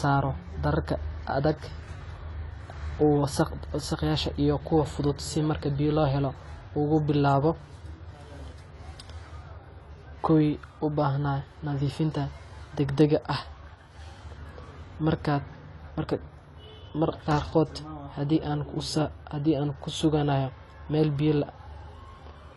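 AAC compression runs throughout this speech recording, with nothing above 11.5 kHz and a plainly audible dull, smeared, warbling texture, likely from AAC-LC coding at a low bitrate, around 32 kbps.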